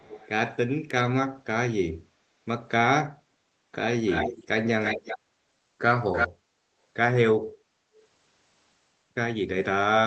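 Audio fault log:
0.00–0.29 s, echo leak: a faint copy of the speech about 392 ms late, about 20 dB down. A distinct delayed repeat rather than smeared room reverberation, likely a loudspeaker echo the canceller missed.
4.06–4.47 s, 4.81–5.19 s and 6.14–6.28 s, echo leak: the delayed copy returns 335 ms late, nearly as loud as the speech and reaching equal level by 6.14 s.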